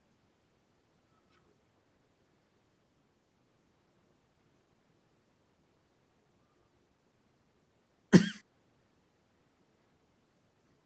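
No faults found: the speech shows the expected signature of a call microphone chain feeding a WebRTC path with Opus coding, with nothing above 8 kHz as that bandwidth setting implies, and nothing further to flag.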